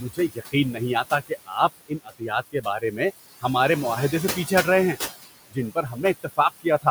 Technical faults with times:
0.00-6.90 converter idle tones
0.00-6.90 noise suppressor artifacts
0.00-0.54 speech cut by the noise suppressor
1.04-3.00 speech cut by the noise suppressor
5.48-6.86 speech cut by the noise suppressor

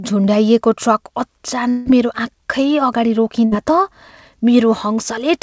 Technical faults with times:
1.70-1.88 long network dropout
3.46-3.53 burst of packet loss

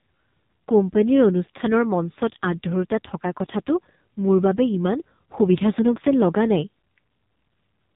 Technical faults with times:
0.00-7.95 AMR narrowband mobile codec

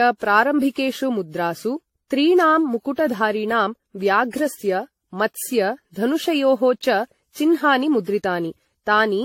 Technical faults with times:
0.00-9.24 generation loss

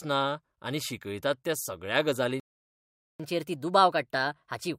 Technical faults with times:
2.40-3.20 playback stall
3.20-4.78 catch-up at higher speed

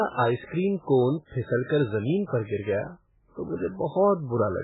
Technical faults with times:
0.00-4.63 MP3 compression
2.26-2.32 pre-echo

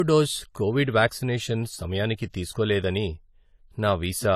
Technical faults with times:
0.00-4.36 low-bitrate audio saved at a high bitrate

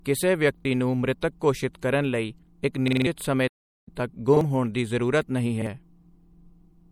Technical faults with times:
0.00-6.92 MP3 compression
0.60-0.65 repeated buffer
2.88-3.06 repeated buffer
3.47-3.88 playback stall
4.37-4.41 repeated buffer
5.62-5.67 repeated buffer

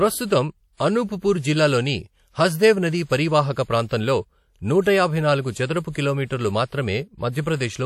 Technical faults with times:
0.00-7.86 WMA compression

